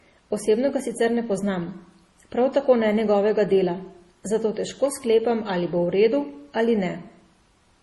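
Transcoding between lossy codecs runs through the whole speech clip. Nothing sounds above 12 kHz, and two kinds of coding damage are heard together: the swirly, smeared highs of a low-rate MP3 and, laid over them, the slightly tonal, grainy texture of Opus. The likely cause is audio first squeezed into an MP3 around 32 kbit/s and then re-encoded to Opus at about 48 kbit/s. The second encoder spent its bits reproducing the first one's artefacts and added its own.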